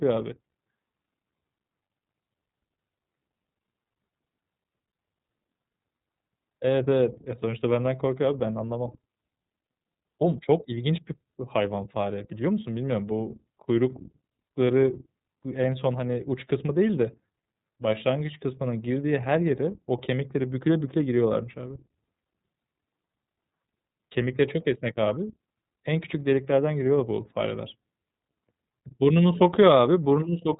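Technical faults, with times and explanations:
Throughout, iLBC codec: the speech is band-limited to a narrowband telephone sound with nothing above 4 kHz, and has a plainly audible rough, synthetic edge. Each frame's excitation is coded independently, and the coarseness fits 30 ms frames at about 13.3 kbps.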